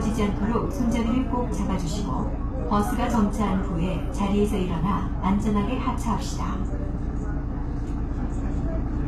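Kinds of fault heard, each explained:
HE-AAC compression: the treble stays bright but sounds synthetic and grainy, and nothing is present above 14.9 kHz. This is likely spectral band replication at a rate near 20 kbps. Unlike a plain low-pass cut, the top end isn't dull.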